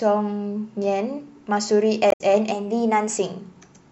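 A speech recording with two faults. Damaged data in the compressed stream makes the decoder lose sync from 2.08 to 2.21 s. From 2.51 to 3.17 s, a drift correction step likely sped playback up by about 6%, so the speech runs fast and rises roughly a semitone (about 101 cents) before snapping back.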